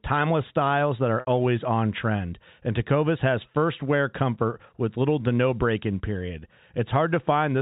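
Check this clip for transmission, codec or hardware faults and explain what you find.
One transmission fault stands out: a brief packet loss with pitch repetition at 1.20 to 1.27 s, between "timeless styles that are" and "always on trend". About 70 ms of audio went missing, which fits a run of 10 ms packets. The receiver filled the hole by looping the last pitch cycle and fading it down, so the voice briefly holds a buzzy, frozen tone. On a waveform that stretch shows identical repeating cycles shrinking in amplitude. On a spectrogram the harmonics run flat and steady before resuming. The G.711 mu-law telephone coding, at 64 kbps, also limits the band to below 4 kHz.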